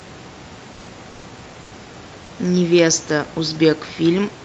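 From 1.63 to 1.71 s, the room background gives way to comfort noise in place of the background, about 3 dB quieter and featureless, likely from discontinuous transmission filling a pause. A spectrogram shows smooth, uniform noise; the waveform shows a flatter, slightly lower noise floor.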